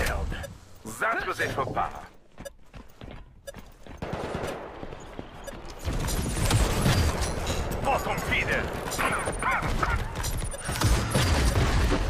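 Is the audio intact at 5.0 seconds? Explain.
Yes, at 5.0 seconds the audio plays through cleanly with no audible fault.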